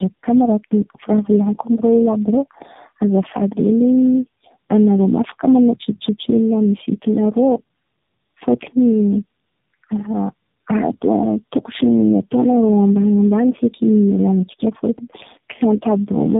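From start to finish this speech carries the marks of tandem speech coding. It sounds like three low-rate speech coders in a row, such as G.729A twice and then AMR-NB, with plain G.711 hops between them. Each coder re-models speech that an earlier one had already smeared, so the errors pile up. You get a rough, buzzy texture, a warbly wobble, and a muffled top end with nothing above 3.8 kHz.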